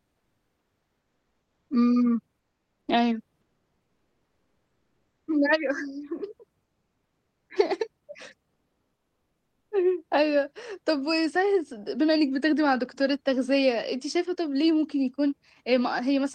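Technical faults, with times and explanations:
0.00–1.69 s, 2.39–2.87 s, 3.41–5.27 s, 8.53–9.71 s: comfort noise in place of the background. Each pause turns to flat, featureless hiss about 2–3 dB quieter, likely from discontinuous transmission. On a spectrogram it is a smooth, uniform band with no background detail.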